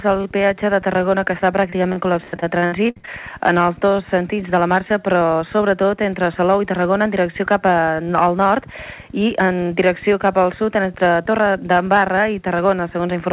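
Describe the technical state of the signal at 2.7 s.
At 2.7 s the sound is inside a stretch of repeated packet loss (robotic sound), 1.7 to 3.09 s: about a dozen holes, each patched by looping preceding sound, give choppy stutter. Waveform shows repeated segments; spectrogram shows smeared, striped frames.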